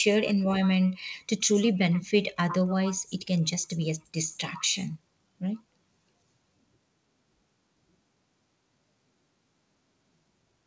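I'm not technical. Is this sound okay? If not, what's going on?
Yes, nothing is wrong with this speech recording. It has passed through a normal internet call connection, whose codec leaves out everything above 8 kHz, so it sounds like a call rather than a studio recording.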